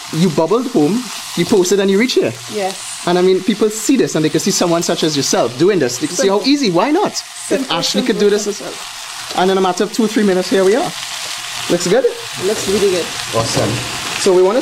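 Nothing stood out on listening to the clip.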